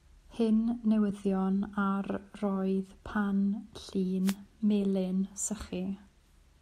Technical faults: wireless microphone noise hit

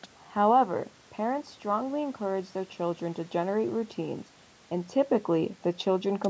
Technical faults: none

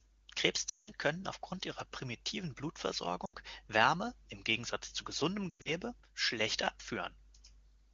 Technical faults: lost AMR speech frames; sudden gain jump

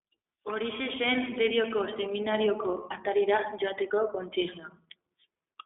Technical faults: iLBC codec

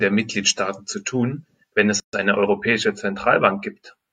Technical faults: gap at a join of encoded pieces; channel delay (comb filtering)

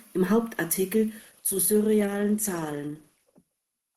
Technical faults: adaptive stream at a lower bitrate

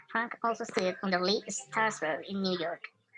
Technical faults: wrong sample rate

